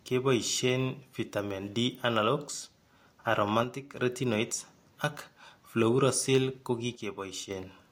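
One channel likely drops out at 3.64 to 3.99 s and 6.95 to 7.51 s: with one of two matching channels silent, the speech falls abruptly by about 6 dB.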